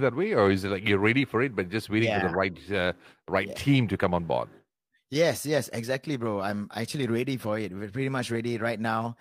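No technical faults can be heard anywhere in this speech recording. There is no event in the sound that needs to be placed in time or explained.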